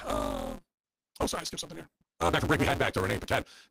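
Throughout, the speech carries a 172 Hz buzz and runs 1.88 times fast with its timbre kept. A truncated block size mismatch discards each block's tail, fitting 256-sample reads.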